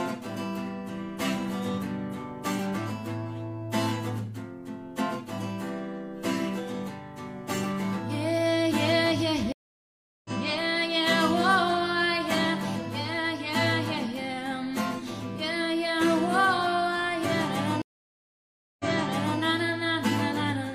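Two stream reconnects: at 9.52–10.30 s a 724 ms dropout, then audio resumes about a second later; at 17.82–19.40 s a 978 ms gap, then resumes 604 ms earlier, repeating material. Each time a fresh decoder restarts mid-stream, showing as a flat, empty band in waveform and spectrogram.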